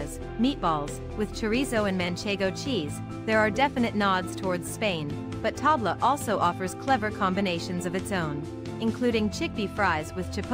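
No audible technical faults anywhere in this audio.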